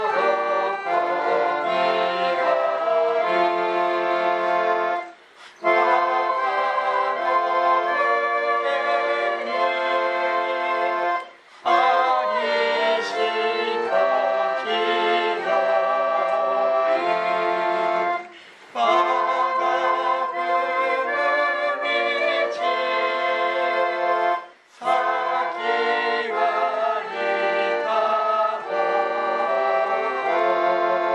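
No technical faults can be heard anywhere in the clip. The sound continues without any audible break or disturbance.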